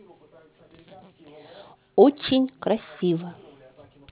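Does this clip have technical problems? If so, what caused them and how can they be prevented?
Yes. Aliasing runs throughout the speech: sibilants turn gritty and metallic, with content folded back below 4 kHz at roughly 20 dB under the signal. This fits a drop from 16 kHz to 8 kHz without an anti-aliasing low-pass filter. To prevent it, low-pass filter below 4 kHz before reducing the sample rate.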